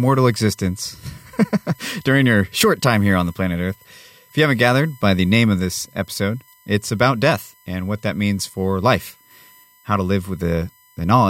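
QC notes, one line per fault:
throughout, USB whine: steady whine on 1 kHz and its multiples, loudest at 13 kHz, roughly 35 dB under the speech, from 1 ms USB frame current leaking through power or ground.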